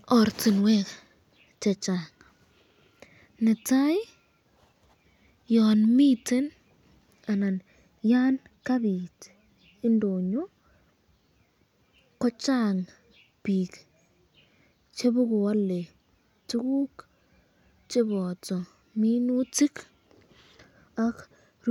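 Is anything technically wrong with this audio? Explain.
No, nothing technically wrong turns up anywhere in this speech recording.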